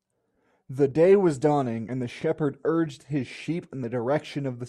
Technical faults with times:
0.91 audio missing between chunks
1.89 audio missing between chunks
2.86 audio missing between chunks
3.84 audio missing between chunks

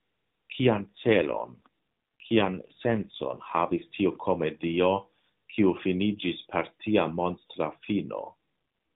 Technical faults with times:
0.78-3.84 AMR rate drop
8.18-8.34 AMR rate drop

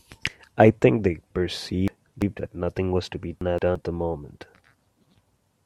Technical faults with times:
1.88-2.39 chunks out of order
3.41-3.75 chunks out of order

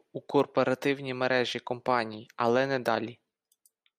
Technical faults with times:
0.30-3.74 word clock ticks

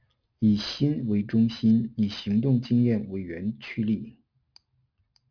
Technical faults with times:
0.00-5.31 aliasing

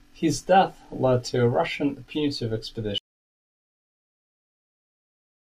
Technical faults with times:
2.98-5.50 audio dropout to silence

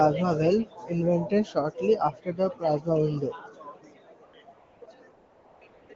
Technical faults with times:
4.25-5.96 AMR comfort noise

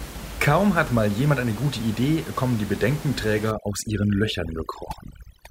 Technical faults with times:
3.51-5.51 overdone noise removal

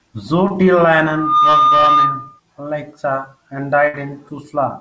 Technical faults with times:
0.48-0.52 short concealed packet loss
1.06-2.40 loudspeaker feedback squeal
3.88-3.95 burst of packet loss

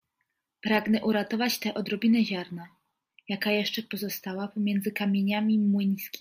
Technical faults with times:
none

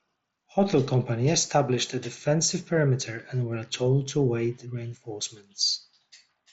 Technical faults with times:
none

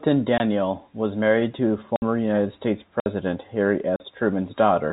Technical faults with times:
0.38-0.40 block of digital silence
1.96-2.02 block of digital silence
3.00-3.06 block of digital silence
3.96-4.00 block of digital silence

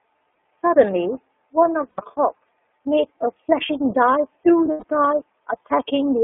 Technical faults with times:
0.00-6.23 iLBC codec
0.35 lost iLBC frames
1.89-2.00 lost iLBC frames
4.71-4.84 lost iLBC frames

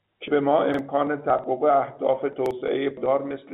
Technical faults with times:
0.28 dropped buffer (overrun)
0.74-0.79 repeated buffer
1.30 dropped buffer (overrun)
2.46-2.51 repeated buffer
2.97 dropped buffer (overrun)

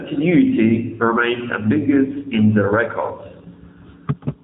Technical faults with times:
0.00-4.44 AMR narrowband mobile codec

